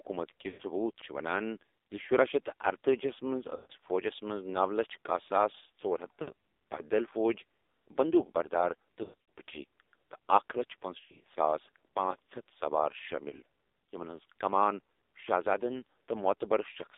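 Throughout, the speech sounds thin, buzzy and synthetic, confined to roughly 300 Hz to 3.7 kHz. This is heavy AMR narrowband mobile codec damage at a low 5.9 kbps rate.

Lost AMR speech frames appear from 0.48 to 0.63 s, 3.56 to 3.73 s, 6.22 to 6.32 s, 9.04 to 9.38 s, 11.00 to 11.25 s and 13.30 to 13.36 s. Most sound like a smeared, drawn-out warble that fades before the speech returns rough, while the single lost frame at 13.30 s is only a brief dip. The decoder is stretching the last good frame over the missing ones, about 20 to 220 ms per gap. The events at 9.04 s and 11.00 s are broken, scattered dropouts rather than single holes.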